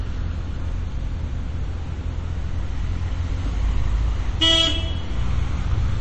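Everyday sound, likely squeezed through low-bitrate MP3 compression, consistent with about 32 kbps: the treble stops dead at 8.4 kHz, and plainly audible watery swirling and smeared attacks run throughout.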